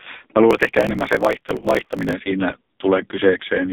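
Throughout, the speech carries heavy AMR narrowband mobile codec damage: buzzy, synthetic vowels and a band of roughly 200 Hz to 3.6 kHz, which fits a low AMR-NB mode near 5.15 kbps. A spectrogram shows a hard ceiling, with nothing above 3.6 kHz.

From 0.49 to 2.15 s, a block size mismatch (truncated) discards the end of each block. The result is a 50 Hz buzz, and the speech runs 1.16 times faster, which fits 1024-sample blocks being cut short. The waveform shows regular seams every 20 ms.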